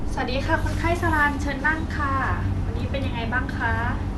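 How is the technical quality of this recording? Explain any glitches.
The technical quality is compromised by plainly audible codec damage across the whole speech clip. Throughout, the sound is dull and carries a gurgling, granular roughness, most likely from MP2 compression at a low rate, which fits roughly 80 kbps. Layer II divides the spectrum into 32 sub-bands and shares out a limited bit budget, so upper bands get dropped and the remaining ones are coarsely quantised. On a spectrogram, energy stops sharply at about 12.2 kHz, with blocky patches flickering on and off below that ceiling.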